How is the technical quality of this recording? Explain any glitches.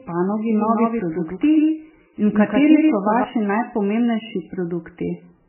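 Poor, with two clear problems: heavy coding damage across the whole recording, and a second copy of the speech laid over the first part of it.

The MP3 compression damage runs the full length. The sound is watery and swirling, with a dull, muffled top and s sounds that chirp and smear. The likely cause is an MP3 encoder starved of bits, which fits a very low bitrate of roughly 9 kbps. It cuts everything above 3 kHz and lets weak frequency lines drop in and out between frames. On a spectrogram there is a hard ceiling at 3 kHz, with patchy, flickering blocks below it.

A doubled audio track runs from 0.50 s to 3.24 s. A full-band copy of the speech trails the original by around 150 ms and sits roughly 5 dB quieter, giving a stuttering, slap-back doubling with no reverb tail. It most likely comes from the same audio being captured twice through a slower path. The copy begins and ends abruptly. 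On the waveform each syllable shows a smaller twin shifted about 150 ms later, and on the spectrogram the same patterns appear twice, offset in time.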